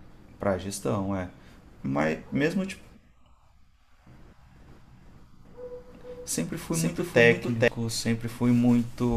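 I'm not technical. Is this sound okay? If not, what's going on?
No. From 4.68 to 7.68 s there's a doubled audio track: the same speech plays twice, with a second copy about as loud, roughly half a second behind. Unlike an echo, it doesn't fade or sound roomy, and it starts and stops abruptly, likely from a second, slower recording path.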